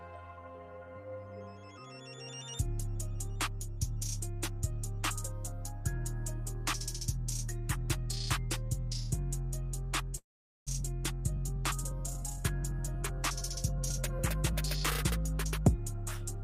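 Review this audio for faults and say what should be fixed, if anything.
From 10.17 to 10.81 s the sound smears into a fading buzz, goes silent, then resumes with roughly 400 ms missing. That's likely a long network dropout, where the receiver stretched the last audio before giving up. More redundancy or FEC on the link would help.

Then, from 11.37 to 14.53 s, there's a jitter buffer speed-up. The receiver trims pitch-period-sized bits to shed the extra delay, around 70 ms in all, so the audio runs about 2% fast at unchanged pitch. A steadier network path would avoid the catch-up.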